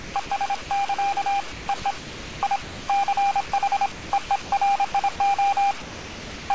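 Right from the start, 0.0 to 0.30 s, the sound gets chopped by the voice detector. Roughly 180 ms of it is swapped for comfort noise in bits. A short sound drop follows at 0.62 to 0.70 s, where 80 ms simply gives way to steady noise.

The chopping comes back from 1.52 to 2.88 s. This is the worst stretch, with about 0.9 s of the sound replaced piecemeal. It's a likely case of a sender-side detector repeatedly deciding quieter parts were background and gating them off. At 3.48 to 3.52 s there's a 40 ms drop, just a blink of noise.

More chopping shows up at 3.92 to 4.52 s, about 340 ms replaced, and at 4.92 to 5.20 s, where only about 60 ms goes. Then at 5.82 to 6.50 s the biggest drop hits. Some 680 ms of sound disappears into flat comfort noise until near the end, which points to the detector likely treating a quiet tail as silence. Everything also sits under a cut-off at 8 kHz, which fits a G.722 call codec at 64 kbps.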